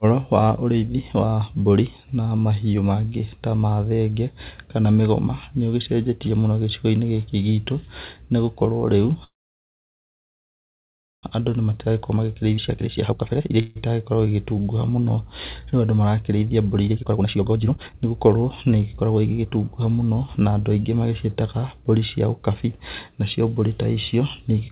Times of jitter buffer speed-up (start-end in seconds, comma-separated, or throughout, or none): 11.33-13.61, 16.89-19.57